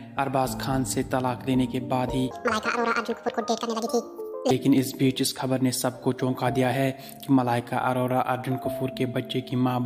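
From 2.31 to 4.51 s the sound jumps high and hurried, pitched up by roughly ten semitones, then drops back to normal. This is a section at the wrong speed, running at 1.77 times its recorded rate, likely from being fitted to the wrong clock.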